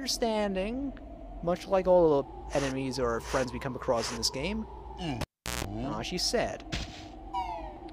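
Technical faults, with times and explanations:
5.21–5.64 s, cable pulled and plugged in: a live cable was yanked out and pushed back in. A pop opens about 384 ms of near silence, which ends in 160 ms of 60 Hz mains buzz while only the plug's tip touches, then a second pop.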